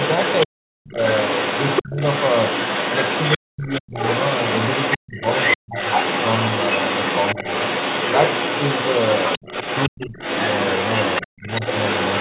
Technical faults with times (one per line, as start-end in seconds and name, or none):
0.00-12.21 other side's voice leaking through
0.46-0.98 speech suppressed in double talk
1.83-1.97 speech suppressed in double talk
3.37-3.95 speech suppressed in double talk
4.97-5.77 speech suppressed in double talk
9.38-10.17 speech suppressed in double talk
11.26-11.62 speech suppressed in double talk